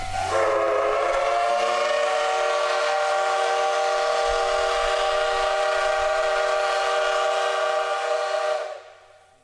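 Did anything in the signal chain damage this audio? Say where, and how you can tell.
No, nothing in the signal chain stood out as damaging this audio on listening.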